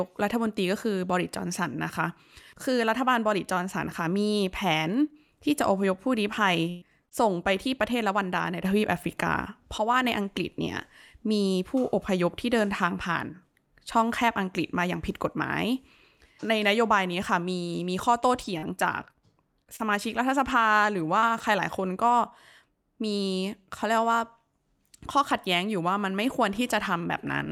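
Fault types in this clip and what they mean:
Burst of packet loss: around 6.69 to 6.83 s, about 120 ms of speech goes missing; the receiver stretches the last sound and fades it, then jumps ahead.
Short concealed packet loss: two back-to-back 20 ms holes at 7.05 and 7.09 s, patched by continuing the previous sound, giving a quick smear or wobble.
Lost packet rebuilt from error correction: single 20 ms frames at 7.11, 8.38 and 22.10 s play from a low-bitrate backup copy, so no gap, just a briefly rougher, noisier patch.
Scattered short gaps: between 18.4 and 21.4 s, roughly five small dropouts, the longest around 40 ms, each filled in, leaving brief ticks and hiccups.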